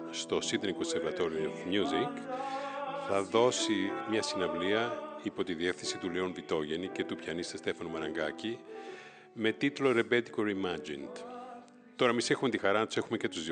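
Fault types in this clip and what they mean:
No faults detected; nothing to report.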